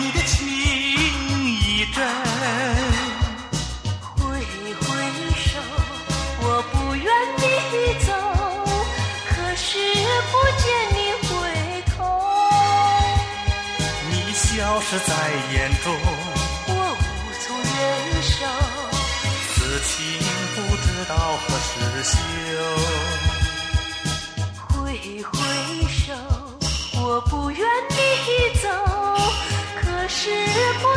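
Nothing here stands out as a technical fault at any point, so there's no problem to describe.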